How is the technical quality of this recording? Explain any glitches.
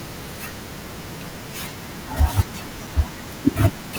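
One glitch stands out at 2.87 s. The speech freezes on a flat, held level for about 2.9 ms, then resumes. This is an underrun with held sample. The output buffer ran dry and the converter kept holding its last value until data arrived again. The gap is 128 samples long. A few milliseconds of live audio, about 3.0 ms, were lost during the hold.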